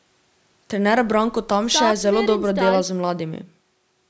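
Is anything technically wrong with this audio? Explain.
No, there is nothing technically wrong with this speech clip. It has passed through a call's microphone processing, which trims the lowest bass and leaves nothing above 8 kHz, as that path normally does.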